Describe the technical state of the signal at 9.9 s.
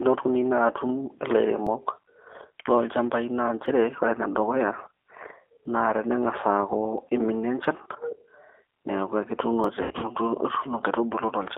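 At 9.9 s the signal sits inside VoIP packet loss concealed by the speech codec, from 9.82 to 10.08 s. About 140 ms is missing across 200 ms, the longest gap 80 ms. The decoder stretches its last pitch and filter into a buzzy tone or coloured noise that fades.

Underneath, the G.729 codec runs throughout at 8 kbit/s. It limits the line to roughly 300 Hz to 3.6 kHz and leaves speech slightly rough and synthetic, with plainly audible codec damage.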